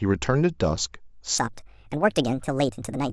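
From 1.38 s to the end at 3.13 s, the speech runs at a wrong sample rate. The delivery turns quick and chirpy, about 1.5 times faster and roughly seven semitones higher, which fits 16 kHz audio being played out at 24 kHz with no rate conversion. On a spectrogram, harmonics and formants jump upward by that ratio at 1.38 s and syllables compress in time; the waveform shows tighter, shorter bursts from that point onward.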